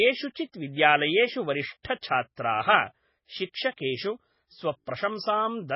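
Throughout the speech, MP3 compression is the likely cause of heavy codec damage: nothing is heard above 5.5 kHz, which fits a very low bitrate near 16 kbps. Weak frequency components drop in and out between frames, giving a watery, swirly texture and smeared onsets.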